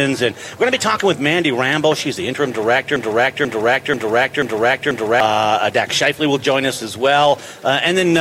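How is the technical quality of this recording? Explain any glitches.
There's one clear glitch: a broken-record loop from 2.96 to 5.20 s, where a 0.49 s fragment repeats five times back to back, likely a stalled player or stream resending its last buffer while the real audio is lost.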